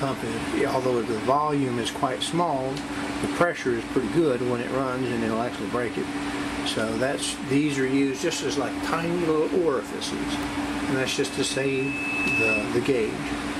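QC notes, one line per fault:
11.14–12.79 s loudspeaker feedback squeal: a lone 2.6 kHz tone feeds on itself around the mic-speaker loop, swelling over about a second and a half to roughly 5 dB above the audio, unlike a steady-level whine.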